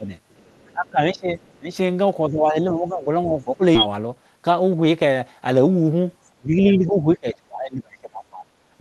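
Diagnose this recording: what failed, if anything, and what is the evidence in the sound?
Call processing: the echo canceller likely failed to separate the talker from loudspeaker echo during double talk and attenuated both. The speech dips at 0.0–0.1 s, 0.72–1.75 s, 2.28–3.64 s and 6.36–8.54 s, sinking roughly 10 to 25 dB at its deepest.

Call processing again: the other side's voice is leaking through, likely because the echo canceller left residual loudspeaker pickup in the microphone signal. Faint traces of a second voice, around 25 to 35 dB below the talker, surface at 0.31–0.7 s, 1.42–1.54 s and 6.69–6.73 s.

Network and jitter buffer: a skip ahead at 3.75–3.88 s, where roughly 0.4 s of audio was discarded while later packets were already queued. Playback jumps forward with no gap, the two sides of the missing stretch butted almost directly together.

Jitter buffer: a speed-up from 4.36 to 4.68 s, where the receiver trimmed short pitch-period pieces to shed excess delay, around 40 ms in total. 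The speech runs at 110% speed without any pitch change, sounding briefly hurried over the Opus call path.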